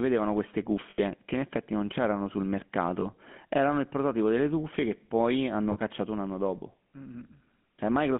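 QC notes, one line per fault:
Throughout: GSM full-rate codec. Buzzy, gravelly roughness on the speech, band held to about 200 Hz–3.4 kHz. It fits a 13 kbps pulse-excited vocal-tract coder, and the damage is plainly audible.
0.90–1.00 s, 3.00–3.06 s, 5.72–5.77 s: lost GSM frames. The last good frame gets repeated, so the speech briefly smears into a rough metallic ring. The dropouts run about 80, 20 and 40 ms.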